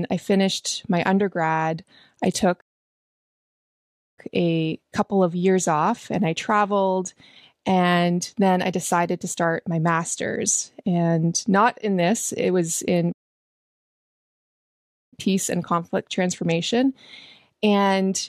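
The player likely ran short of buffered data or had its output thread held up, so the speech hits a playback stall twice: from 2.60 to 4.19 s, a gap of about 1.6 s, and again from 13.12 to 15.14 s, lasting 2.0 s. Each time the sound cuts to silence mid-flow, then the speech carries on once output recovers.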